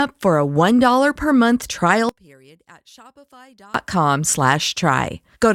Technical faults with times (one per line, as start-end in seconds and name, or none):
2.09-3.74 one channel inverted